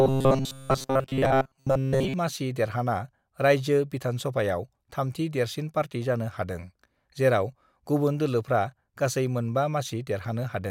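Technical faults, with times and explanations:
0.01 to 2.14 s, robotic sound from repeated short buffers: for the first couple of seconds the speech turns into a stiff, metallic buzz pinned at about 133 Hz that still roughly tracks the words. That's likely the playback running dry and looping a tiny chunk of about 7.5 ms over and over, covering most of that stretch, while the real audio gets skipped. The loop rate sets that fixed, robotic pitch.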